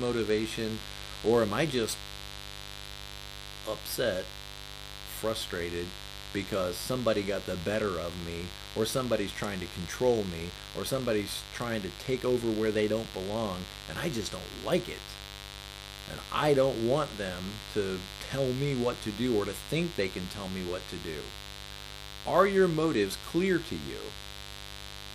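Mains buzz runs from start to finish under the speech, sitting only roughly 15 dB below it. Something in the signal chain, a dimmer, a rectifier or a poorly shielded cable, is admitting sharp switching spikes locked to the 50 Hz supply, two per cycle. Because those spikes are so abrupt, they carry a dense ladder of 50 Hz harmonics reaching up into the kilohertz range, so the result is a steady, raspy buzz rather than a soft hum.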